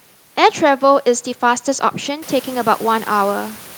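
No technical faults can be heard in the speech. Room noise in the background rises by about 15 dB around the two-second mark and stays about 21 dB below the speech after that, which is part of the recording itself.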